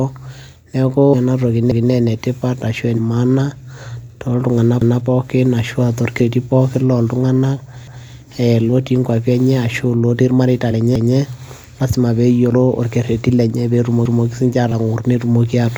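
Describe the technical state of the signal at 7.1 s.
At 7.1 s the signal is intact, with no fault audible at that point.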